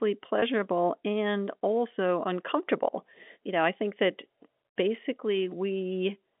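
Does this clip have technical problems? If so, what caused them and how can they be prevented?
Yes. Packet loss with pitch repetition affects the speech from 0.40 to 0.42 s. About 20 ms of audio, which fits a single lost packet, is bridged by repeating the last pitch period, heard as a brief buzzy held tone. A plain dropout would leave a silent gap or a click. The narrow 200 Hz to 3.6 kHz telephone band of the G.711 line remains audible around it. Using a jitter buffer and forward error correction or redundancy on the network path would prevent the loss.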